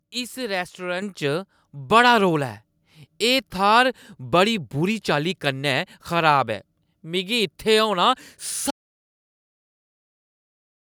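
At 1.02 s the microphone volume is stepped up by about 7 dB in a single jump, the kind of correction call software applies when it judges the input too quiet. Speech and background noise rise together, so the whole sound abruptly becomes louder.

From 8.71 s to the end there is an audio dropout to silence: the sound cuts off and is replaced by silence with no room tone. The likely cause is a lost input, such as a disconnected device or a failed link, while the recorder kept writing silence.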